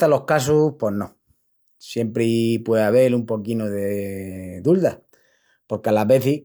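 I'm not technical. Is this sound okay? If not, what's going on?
Yes, this one's fine: nothing in the recording cuts out, jumps, crackles or sounds broken, so there's nothing here to worry about.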